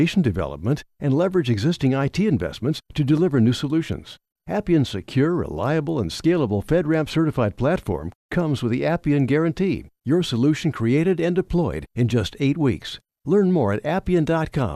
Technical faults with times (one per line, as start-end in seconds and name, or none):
none